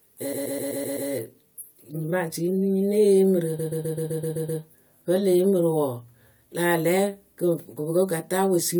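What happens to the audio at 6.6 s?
Nothing goes wrong at 6.6 s: the speech runs through that moment intact, with no dropout, click or distortion.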